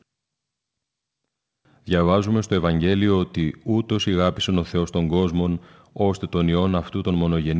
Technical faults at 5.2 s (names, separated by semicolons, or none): clock drift between sender and receiver; repeated timing corrections